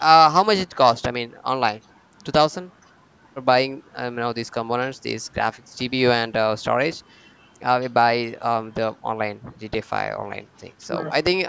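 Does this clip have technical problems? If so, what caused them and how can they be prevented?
No, there are no technical problems in this clip.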